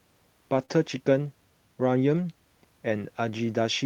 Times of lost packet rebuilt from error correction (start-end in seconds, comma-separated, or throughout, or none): 0.53-0.72, 2.16-2.18